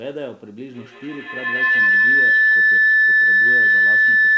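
From 0.68 s to the end, a feedback howl builds. Each loop trip adds level. A tone around 2 kHz, with the loop repeating roughly every 150 ms, reaches about 17 dB above the speech.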